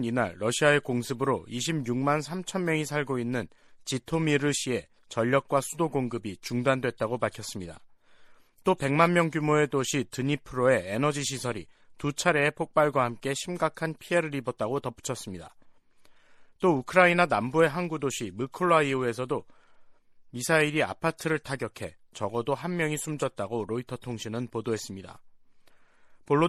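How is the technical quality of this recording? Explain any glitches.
The technical quality is limited by one fault that runs the whole way through. MP3 compression, from start to finish: the sound is watery and swirly, with dull treble and smeared attacks. The likely cause is an encoder short of bits, consistent with a low bitrate around 64 kbps, cutting the highs and dropping weak frequency lines that flicker from frame to frame.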